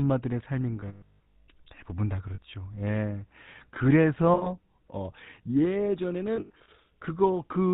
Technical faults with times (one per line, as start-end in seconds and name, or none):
0.00-7.74 GSM full-rate codec
0.80-1.49 lost GSM frames
2.34-2.39 lost GSM frames
4.34-4.50 lost GSM frames
6.36-6.69 lost GSM frames